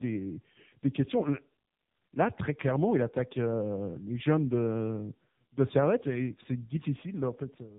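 Throughout, the speech sounds rough, muffled and warbly, with nothing above 3.8 kHz. This is tandem speech coding: two speech codecs in a row, the second re-encoding the first's already degraded output.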